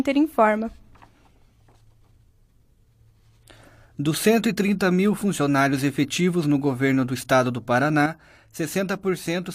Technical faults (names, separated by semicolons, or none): one channel drops out